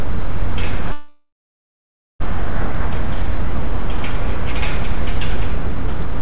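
From the first instant to the end, the DC offset can't be heard as a tone, but the waveform sits off-centre, riding on a constant shift away from zero. That steady displacement eats into the headroom on one side and appears as fixed energy at the very bottom of the spectrum, beneath the band-limited sound of the call path, which carries nothing above 4 kHz, consistent with G.711 mu-law at 64 kbps.

At 0.92 s the sound stops moving forward and turns into a smeared continuation of its last moment, a buzz or hiss that fades away and leaves about 0.87 s of silence before the audio resumes at 2.22 s. This is a call audio freeze. The likely cause is packets held up in transit, draining the jitter buffer, so the receiver filled roughly 1.28 s with synthesised sound. Nothing was dropped; playback simply picks up where it halted, now running about 1.28 s later than before.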